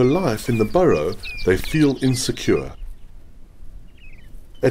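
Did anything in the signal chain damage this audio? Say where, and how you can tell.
No, nothing in the signal chain stood out as damaging this audio when I listened to it.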